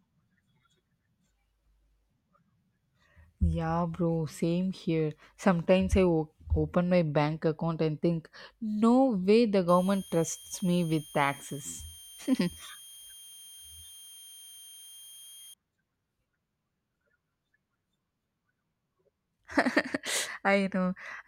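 From 9.68 to 15.54 s, a switching supply whistle sits under the speech: a thin, high tone around 3 kHz, roughly 20 dB below the speech. It comes from a switching power supply cycling at an audible rate, and its pitch wanders slightly between 3.18 and 3.22 kHz as the load shifts. On a spectrogram it shows as a narrow horizontal line with a slight waver. The waveform barely changes.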